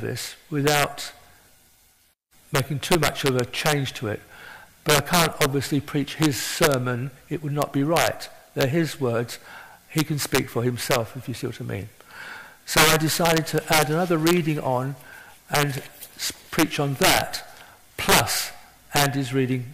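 All the way through, the loud moments crack apart with integer overflow. The signal's been pushed about 10 dB too hot, and instead of being held at the ceiling, any peak that goes past the largest integer wraps around to the opposite sign and leaps across the full range. Only a tiny share of samples, under one percent, go over, but each one lands as a vicious snap, far harsher than ordinary clipping would sound.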